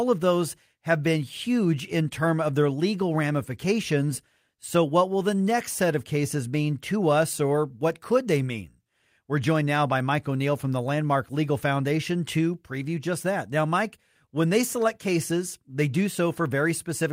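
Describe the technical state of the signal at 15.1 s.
At 15.1 s the audio is intact, with no audible fault at that moment.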